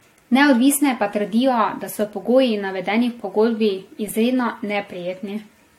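Speech with generation loss throughout, likely from repeated AAC-LC encoding at around 64 kbit/s, roughly three passes, leaving swirly, hollow smearing, blurred attacks and nothing above 16.6 kHz.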